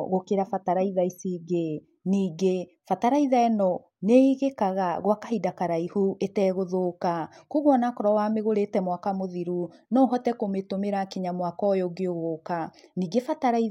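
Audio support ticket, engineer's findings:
Speech clip reviewed end to end: no audible faults detected, no component implicated.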